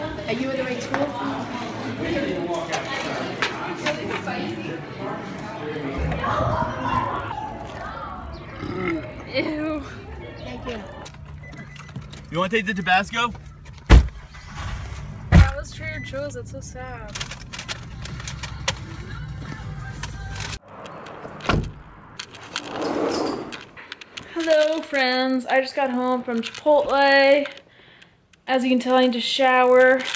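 From start to end, the audio carries a resampler restarted on every block. The conversion was run on 20 ms blocks in isolation, which fits a change from 24 kHz to 16 kHz. At each block boundary the converter lacked the true neighbouring samples, so every edge picks up a small error. These errors repeat at 50 Hz. With blocks this short they merge into a buzz rather than separate ticks. The buzz rides on the sound and drops out when the signal stops.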